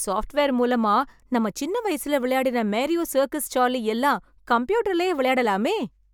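A speech recording in which no technical faults can be heard anywhere in the signal.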